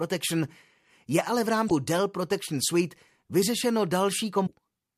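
At 1.66 s, just after "je ale v", and again at 4.43 s, the speech is broken by a short glitch from damaged data in a compressed stream. Each lasts under 60 ms and comes from corrupted frames the decoder misreads before it regains sync. On a spectrogram each appears as a narrow break unrelated to the harmonics around it. In the waveform there is an abrupt discontinuity.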